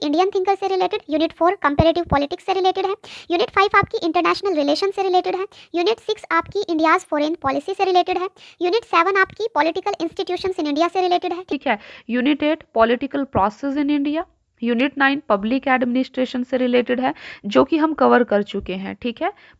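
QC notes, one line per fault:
0.00–11.52 s, wrong sample rate: sound runs 1.38 times fast and 5.55 semitones high, which fits 16 kHz material played at 22 kHz without conversion.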